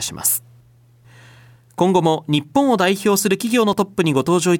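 At 3.73 s the speech jumps forward by about 9 ms, heard as a single small click or skip. This is an overlap between stream segments. Two consecutive segments claimed the same stretch of time, so the player trimmed that span as though it were duplicated, discarding sound that existed only once. Unlike a dropout, nothing is replaced with silence. The waveform simply splices together across the missing slice.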